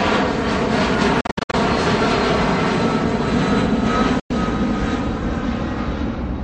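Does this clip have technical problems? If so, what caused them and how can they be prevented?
Yes. Bluetooth dropouts, likely from late wireless packets, open silent holes between 1.21 and 1.54 s (gaps up to 61 ms) and at 4.20–4.31 s. The sound resumes as if it had played on, unlike a glitch that resumes where it stopped. Keeping the headphones close, unobstructed and away from 2.4 GHz interference prevents this.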